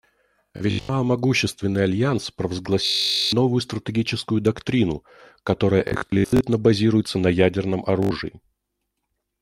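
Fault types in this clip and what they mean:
Bluetooth stutter: the wireless link dropped or delayed packets, so the receiver kept replaying its last short slice, giving that buzzy machine-gun repeat. It hits four times here, worst around 2.86 to 3.33 s, and the speech picks up further on as if it kept going.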